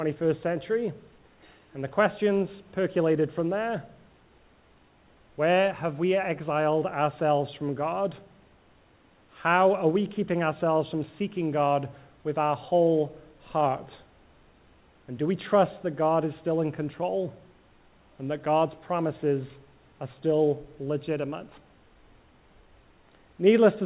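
The signal shows no technical faults, and the call path behaves as a narrowband link would, with no content above 4 kHz, which fits a G.711 mu-law codec running at 64 kbps.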